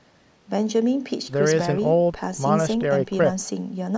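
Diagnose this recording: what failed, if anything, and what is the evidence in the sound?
Nothing failed; no fault is audible anywhere in this speech.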